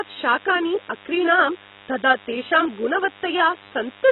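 From the start, a steady, thin DECT cordless phone buzz at 100 Hz with many harmonics sits about 25 dB below the speech: a nearby handset or base station's 10 ms radio bursts are being rectified by the audio circuit.

Also throughout, the speech sounds dull and smeared, with nothing above 3.9 kHz. This heavy damage is likely from AAC compression, fitting AAC-LC at a bitrate around 16 kbps.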